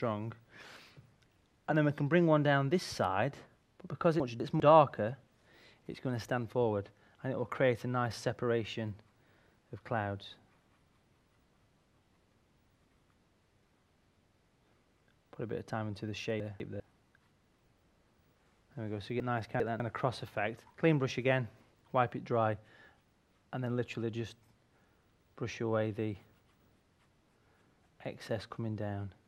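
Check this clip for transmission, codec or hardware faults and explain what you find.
Transmission faults are present: four brief passages where the audio plays in the wrong order.

Chunks out of order occur at 4.2–4.6, 16.4–16.8, 19.2–19.8 and 26.4–26.8 s. In each, a 200 ms block arrives one slot late (two slots late at 19.2 s), so the sound jumbles briefly across the hard joins. Waveform and spectrogram show three abrupt vertical discontinuities per event, with mismatched content either side.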